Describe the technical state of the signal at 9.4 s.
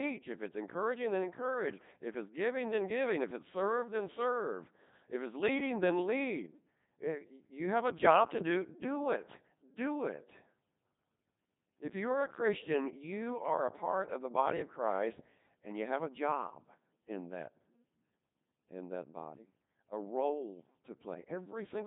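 At 9.4 s the speech sounds robotic and buzzy, with a synthetic timbre and nothing above 3.8 kHz. This is Codec 2 vocoder damage, present throughout the clip and heavy. Rather than preserving the waveform, the codec keeps only pitch, voicing, energy and a coarse spectral envelope, then rebuilds the voice from sine waves. The robotic buzz fits a low-rate mode around 2.4 kbit/s.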